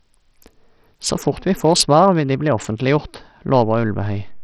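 A speech clip carrying heavy Bluetooth SBC compression damage throughout. The treble flickers and drops out, and a gritty, aliased grain rides on the sound, all of which points to a small bit pool at a low rate near 64 kbps. On a spectrogram the upper sub-bands appear as patchy, blocky gaps with smeared energy above the speech harmonics. At 3.55 s a DC step makes a low thump as the waveform's zero line jumps. The offset then holds until the clip ends, shifting the whole trace off centre while the speech itself continues unchanged. On a spectrogram this shows as a brief broadband vertical line at the step.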